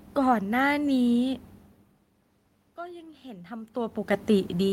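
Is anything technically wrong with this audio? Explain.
Yes. From 2.75 to 4.04 s there is automatic gain rising. The level reaching the microphone falls by about 19 dB. The gain control reads this as too quiet an input. It then raises its gain slowly, by about 4 dB over 1.3 s. Voice and room noise swell together. The result is a gradual lift in loudness, with the background noise climbing alongside the speech.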